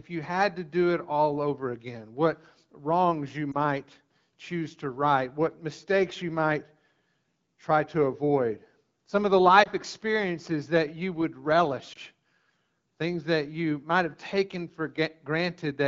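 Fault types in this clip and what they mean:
Lost AMR speech frames: Three brief dips or warbles break up this speech, each a single 20 ms frame gone missing, at 3.52 s just after "again what wrongs you", at 9.64 s between "avoid some of the" and "experiences that you would", and at 11.93 s right after "experiences that you would". In each case the frame failed its checksum after radio errors, and the AMR-WB decoder filled the gap by repeating the last good pitch and vocal tract settings at reduced gain, with the light coding of the 12.65 kbit/s rate heard around it.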